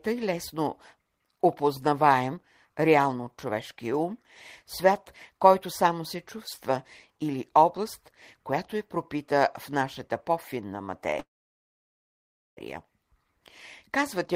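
At 11.19 s the speech stalls in a call audio freeze lasting until 12.59 s. The last sound is carried on only briefly before about 1.3 s of silence, then speech resumes exactly where it left off, with nothing skipped, so everything after arrives roughly 1.4 s late. The likely cause is delayed packets draining the jitter buffer. On a spectrogram, a short smeared tail gives way to an empty band; the waveform flattens to near zero.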